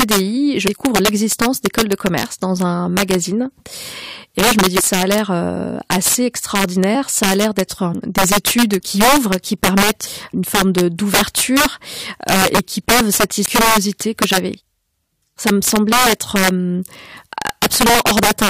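Throughout the speech, integer overflow breaks up the loudest moments. The signal is pushed about 7 dB past full scale, and instead of being limited, a few percent of samples wrap to the opposite extreme. Unlike clipping's flattened buzz, each peak snaps into a violent, sharp crack.

Damaged data in a compressed stream produces short squawks and blips at 0.67 s, 4.79 to 4.81 s, 6.94 s, 10.06 s and 13.45 to 13.47 s. At each point the decoder misreads corrupted frames, loses sync and hunts for the next header.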